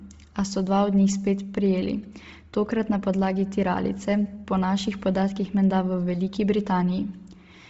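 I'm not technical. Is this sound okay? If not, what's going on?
No. From start to finish the voice sounds dull and fizzy, with a breathy, grainy edge. Nothing above 7.7 kHz comes through, so the crisp top of the speech is gone. This is likely Bluetooth LC3 compression, the squeezing that wireless earbuds and headsets apply. It chops the sound into tiny slices and keeps too little detail in each. It drops the highest sounds and fills some gaps with hiss.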